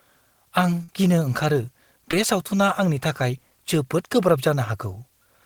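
From start to finish the speech carries low bit depth with dither: an even, constant hiss sitting about 45 dB below the signal, with no grit or distortion, which fits roughly 10-bit quantisation with dither added before rounding. On a spectrogram it shows as a flat, uniform noise floor across all frequencies, filling the gaps between phrases.

From 0.83 to 0.89 s comes a burst of packet loss, just before "गिनो ओंखारो बे सावथुना". About 50 ms of audio never arrived, and the receiver stretched the last sound for roughly that span, fading it, so a held buzz or hiss replaces the real speech. The waveform shows a repetitive, decaying segment, then an abrupt resumption.

At 2.11 to 2.13 s, right after "आं गिनो ओंखारो", a short concealed packet loss drops about 10 ms. The decoder patches it by extending the preceding sound and blending back, heard as a tiny smear or wobble. A spectrogram shows a brief blurred sliver.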